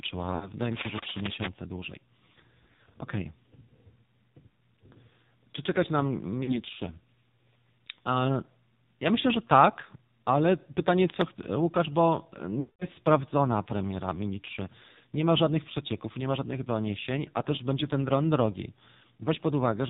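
The whole clip goes through the AMR narrowband mobile codec, so nothing above 4 kHz survives, and the heavy buzzy, synthetic edge on the speech fits a low mode around 5.9 kbps. From 0.36 to 0.52 s there are lost AMR speech frames: the decoder stretches the last good sound over a gap consistent with three 20 ms frames, giving a brief warbly dip. From 0.72 to 1.48 s, cable scratch noise adds dense rustling bursts only a little below the speech, likely from a worn cable or connector being moved. Another short frame loss warbles from 6.44 to 6.61 s, and a quick scratch follows from 11.09 to 11.25 s. The longest dropout runs from 12.60 to 12.86 s, where the concealed sound drags out and fades toward silence before the speech returns.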